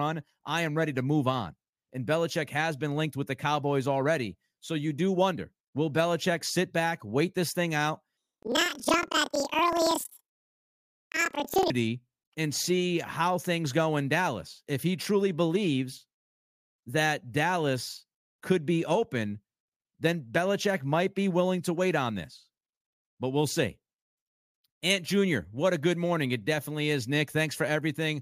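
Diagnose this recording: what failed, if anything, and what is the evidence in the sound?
From 8.17 s to 11.72 s, the speech jumps an octave higher and flutters at about 21.5 Hz, yet its pace stays normal. This points to a sample-format conversion fault: planar audio read as interleaved. Each 46.44 ms block holds all left samples, then all right, but it is read as alternating pairs. Each channel's half therefore plays back twice as fast, one after the other. The flutter rate fits a 2048-sample block.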